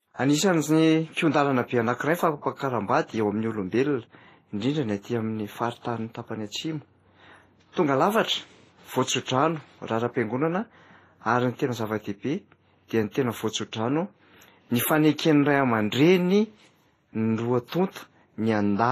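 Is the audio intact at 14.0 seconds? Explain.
No. At 14.0 seconds, as throughout the clip, the speech carries the layered artefacts of transcoding between lossy codecs: nothing above 14.1 kHz, plus smeared, swirly coding noise from two stages. It sounds like a low-rate MP3 likely re-encoded to low-rate Vorbis.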